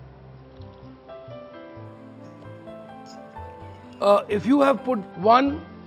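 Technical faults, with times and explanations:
1.85 to 5.12 s, imaging from linear upsampling: the top dulls near 6 kHz, which fits a 12 kHz source raised by straight-line interpolation. That weak filter leaves a mirrored spectrum from 6 to 12 kHz, about 35 dB down, heard as faint metallic shimmer.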